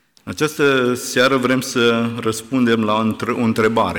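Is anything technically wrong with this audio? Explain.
Yes. Throughout, the speech crackles on its loudest peaks. This is hard clipping: the signal runs about 8 dB too hot, so around one percent of samples are flattened, adding high harmonics.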